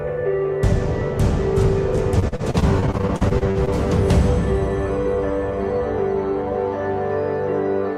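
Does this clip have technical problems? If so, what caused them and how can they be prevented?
Yes. From 2.19 to 3.69 s there's repeated packet loss, which gives that choppy, robotic sound. Packets kept arriving late or not at all, each hole got patched by stretching the last bit of sound, and the next gap landed soon after. The holes are short, the longest about 44 ms, but roughly a quarter of that stretch is patched-in sound. A steadier network path, a larger jitter buffer or forward error correction would head this off.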